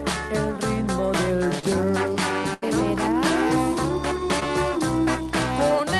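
Audio carrying two short concealed packet losses and one burst of packet loss. At 1.59 to 1.65 s and 4.40 to 4.43 s, about 20 ms of audio failed to reach the decoder in time. The receiver bridged each hole by extending the preceding sound (32 ms of fill in the first case, 11 ms in the second) and then crossfading back into the real signal. Each is heard as a momentary smear or wobble. A very brief transient falling inside either gap would be lost. At 2.54 to 2.64 s a burst of packet loss removes about 80 ms. The concealment carries the last sound forward for 82 ms while fading it down, so it comes across as a held buzz or a decaying hiss. Playback then resumes further along, and the 80 ms between the two points is gone.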